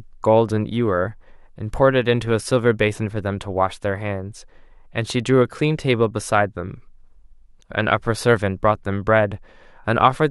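No technical faults can be heard anywhere in this recording.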